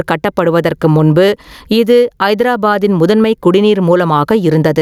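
Throughout the speech, the gain ducks by about 15 dB under each loud syllable. This is gain pumping, likely from excessive input gain driving a fast limiter.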